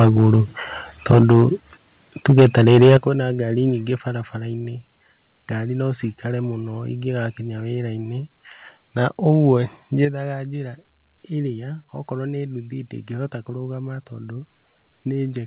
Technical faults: microphone overload; microphone volume stepped down

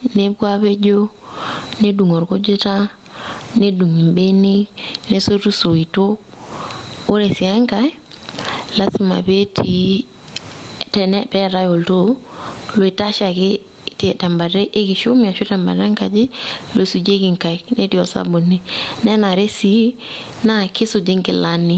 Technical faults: gain pumping

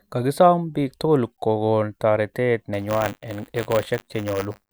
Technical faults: buffer tearing

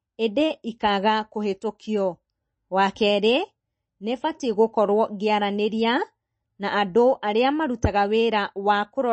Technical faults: MP3 compression

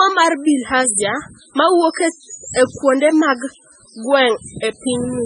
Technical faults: MP3 compression

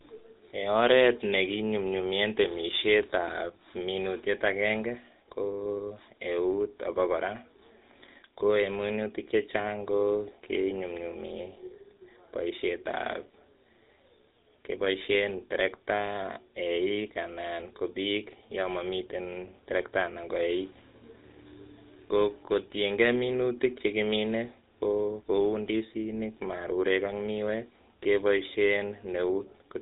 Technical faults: GSM full-rate codec; channel delay (comb filtering)

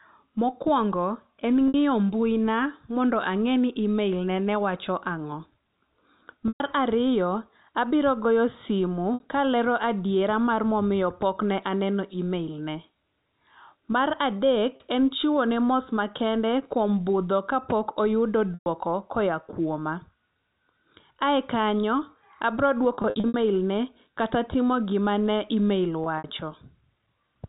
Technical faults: packet loss with pitch repetition

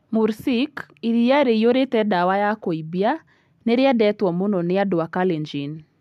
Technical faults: none

